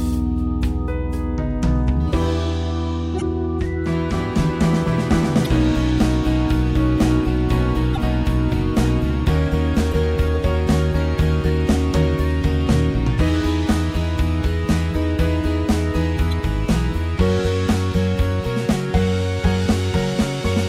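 Damaged data in a compressed stream causes brief glitches at 3.18–3.22, 5.42–5.47, 7.93–7.98, 9.89–9.93 and 16.31 s. Corrupted bytes make the decoder misread frames and lose sync until the next header, producing short chirps or blips of about 40 ms, the last even shorter.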